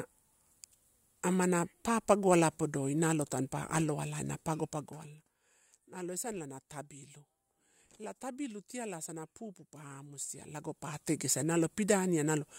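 A speech clip with zipper noise during two level moves. From 4.61 to 5.38 s, between "nalo tampa aloalai na" and "nalo esanala na tabbilu", the level drops by roughly 15 dB, and from 10.16 to 11.18 s it rises by about as much. Both moves go in 2 dB steps at about ten a second, with no smoothing, so each jump clicks. A waveform shows a staircase envelope, and a spectrogram shows faint vertical broadband lines at each step.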